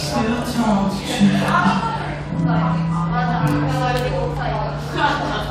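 No technical faults can be heard anywhere in this recording.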